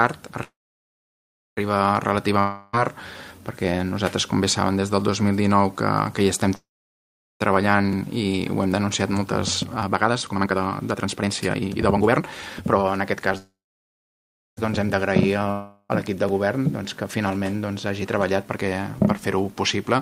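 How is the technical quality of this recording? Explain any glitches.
The recording has repeated delivery glitches: three freezes, two dropouts and two speed-up passages.

Call audio freeze at 0.43–1.59 s, 6.55–7.42 s and 13.38–14.59 s. Packets were likely held up and the buffer ran dry, so the last sound trails off as a fading buzz into silence (about 1.1 s, 0.85 s and 1.2 s of fill), then resumes where it stopped, with nothing lost.

Long network dropout at 2.39–2.75 s and 15.51–15.91 s. Audio likely never arrived, so about 0.34 s and 0.38 s are missing. In both, a fading buzz fills almost the whole gap before the sound returns further on, with the lost stretch skipped.

Jitter buffer speed-up at 8.66–13.31 s and 17.71–19.45 s. The receiver was holding too much audio and trimmed tiny pitch-period slices repeatedly to catch up. The first passage runs at 140% speed, roughly 2 s shed, and sounds clearly hurried. 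The second runs at 108%, about 0.15 s shed, and is only slightly rushed. Pitch stays the same in both.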